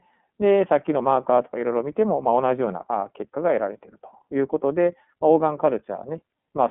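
iLBC codec damage runs through the whole speech clip. The sound is confined to a telephone band of about 200 Hz to 3.4 kHz, with nothing above 3.6 kHz. Each 30 ms frame's excitation is coded independently, fitting the 13.33 kbps mode and leaving a plainly audible rough, synthetic edge.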